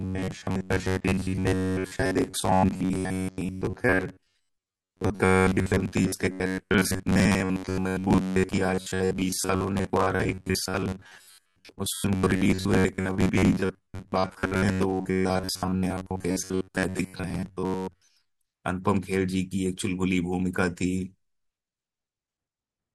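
From 0.01 to 18.36 s there's robotic sound from repeated short buffers: a rigid metallic buzz near 94 Hz, likely from a roughly 11 ms chunk looping over most of the audio.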